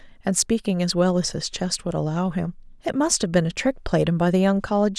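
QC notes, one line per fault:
No faults found on this speech clip; nothing to log.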